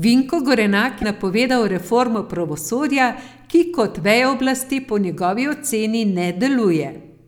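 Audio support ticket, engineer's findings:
Likely broken MP3 bit reservoir: frame dropped, next frame decodes borrowed bits from wrong frame's data. Sound jumps ahead, 30 ms disturbance at 1.01–1.04 s, just before "napovedal reformo pravosodja". Duration fits one 26.1 ms frame.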